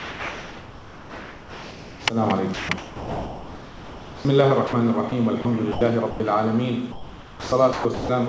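From 0.0 to 2.06 s, sound dropped by the voice detector. The sender likely judged the sound to be background and stopped sending. Steady comfort noise replaces it, and about 1.3 s of real sound is lost.

From 2.54 to 4.25 s, sound is chopped by the voice detector. Transmission likely switches on and off repeatedly. The sound turns choppy, with holes filled by comfort noise.

Short dropouts of the same kind follow. They occur at 4.67 s for 60 ms, at 5.09 s and 5.42 s for 30 ms each, and at 5.72 s and 6.11 s for 90 ms each. Each brief gap is filled with comfort noise.

From 6.92 to 8.09 s, chopping by the voice detector returns, with the same choppy sound.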